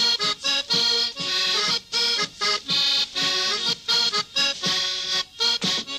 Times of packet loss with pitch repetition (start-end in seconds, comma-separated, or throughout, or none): none